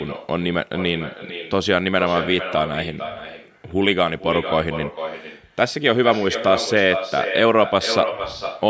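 Every phrase of speech in this call recording is trailed, for the whole clip, by a quieter, thinner copy about 10 dB down and roughly half a second late. That is echo with no canceller: the far end's loudspeaker fed its microphone, and nothing subtracted the returning signal.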